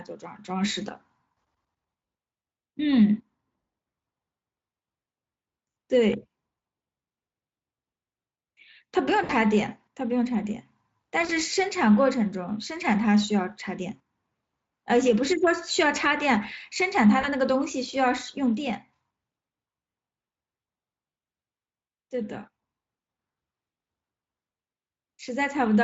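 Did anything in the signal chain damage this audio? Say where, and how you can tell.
Yes, at the network stage: VoIP packet loss concealed by the speech codec, at 9.23–9.34 s, 11.25–11.32 s and 17.21–17.28 s. The Speex decoder covers gaps of about 60, 40 and 20 ms, fitting lost 20 ms frames, by extending the last pitch into a fading buzzy tone or coloured noise that stays weak briefly afterwards, unlike a hard dropout's silence.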